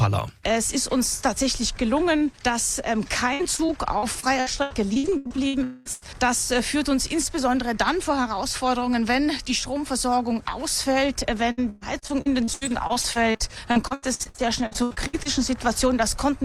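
Repeated packet loss (robotic sound) runs from 3.33 to 5.55 s and again from 11.51 to 15.27 s. In the first span about 15 short holes, the longest 79 ms, take out roughly 0.6 s of audio. In the second about 30 holes, the longest 118 ms, take out about 1.1 s. Each hole is filled by stretching the last fragment of sound, and the next one arrives before the audio settles. About a quarter to nearly a third of each span is patched material, so the sound turns choppy, with pieces missing.

A long network dropout follows at 5.63 to 5.87 s. For about 220 ms nothing new is heard. The gap is covered entirely by continued sound that smears into a fading buzz or hiss rather than dropping to silence, and the audio picks up later without the lost part. This was likely an outage in delivery rather than a glitch at the source.

A burst of packet loss comes right after, at 5.93 to 6.03 s. An 80 ms block of audio never plays. 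The receiver holds the preceding sound and turns it down across the gap, giving a brief held buzz or fading hiss before the audio resumes further along, with that slice gone.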